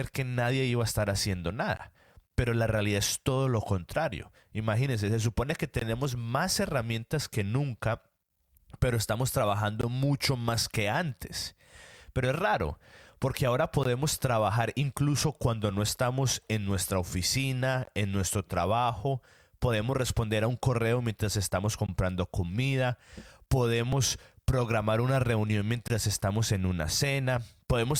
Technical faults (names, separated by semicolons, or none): gap between chunks; overlap between stream segments